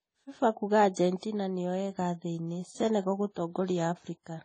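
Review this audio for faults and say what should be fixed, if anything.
Throughout the speech, nothing is heard above 10 kHz, with the artefacts of two codecs heard together. Two distinct artefact types together suggest transcoding between lossy codecs, likely a low-rate MP3 re-encoded to AAC-LC, rather than one codec alone. Prevent it by encoding once from the original lossless source.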